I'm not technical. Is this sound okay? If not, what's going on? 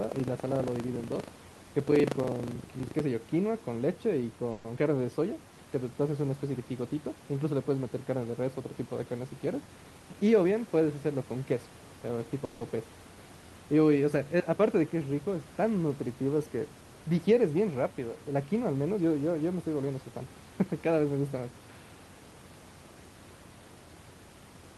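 No, there are four kinds of fault in this speech recording.

From the start to 3.01 s there is buffer tearing. The software filling the playback buffer and the hardware reading it have slipped out of step, so in each cycle a small slice, roughly a tenth, is audio from about 70 ms earlier, with hard joins either side. Those joins repeat 25 times a second, which fits a 40 ms buffer cycle, and produce a rough, robotic buzz over the speech.

At 4.51 to 4.66 s and again at 12.45 to 12.63 s there is a call audio freeze. The sound stretches into a short, fading buzz for about 130 ms and then 160 ms before the speech resumes where it left off. Nothing is lost, but a pause has been inserted each time. The likely cause is packets delayed on the network, so the receiver's jitter buffer ran dry and it kept the last sound going while it waited.

Right after the first freeze, at 4.76 to 4.79 s, comes short concealed packet loss. 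About 40 ms of audio never arrived in time. The receiver filled a brief 10 ms patch by continuing the previous sound and blended back in, and the rest was simply skipped. It is heard as a quick smear or wobble, with a tiny piece of the speech missing.

From 9.46 to 10.52 s there is a jitter buffer speed-up. The receiver had more audio stored than it wanted, so it trimmed tiny pitch-length pieces in quick succession, roughly 150 ms in total. The speech runs about 12% faster at unchanged pitch and sounds briefly hurried.

The faint background room noise belongs to the recording itself.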